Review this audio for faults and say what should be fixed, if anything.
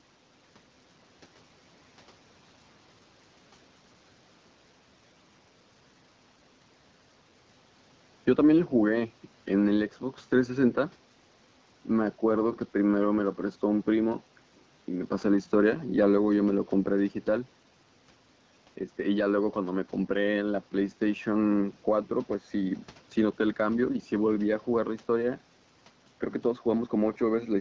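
No faults found; nothing here needs fixing.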